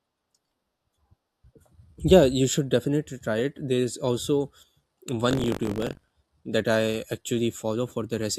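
From 5.29 to 6.10 s, just before "that I", buffer tearing puts a robotic 46.9 Hz rattle on the speech: writer and reader crossed, fitting a 1024-sample buffer.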